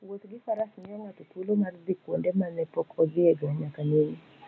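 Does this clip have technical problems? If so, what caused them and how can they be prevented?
Yes. Automatic gain rising occurs from 0.05 to 2.62 s, lifting the level by about 9 dB, and again from 3.14 to 4.24 s by about 4 dB. The call's gain control judged the speech too quiet and turned itself up gradually, so the voice and the room noise behind it swell together rather than staying steady. To prevent it, speak closer to the microphone at a consistent level or disable automatic gain and set the input level manually.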